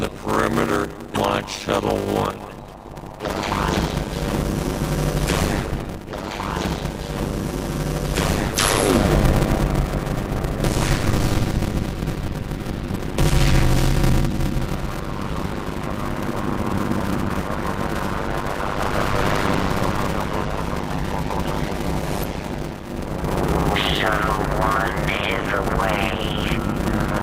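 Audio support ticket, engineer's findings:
Block size mismatch (padded), whole clip: steady 100 Hz buzz, audio slowed to 0.533x at normal pitch. 256-sample writes into larger reads, which fits 480-sample blocks; waveform shows regular zero gaps, spectrogram vertical striping.

Damaged data in a compressed stream at 1.14, 12.93 and 22.21 s, 40 ms each: brief glitches, decoder losing frame sync. Spectrogram shows brief broadband smears; waveform shows small discontinuities.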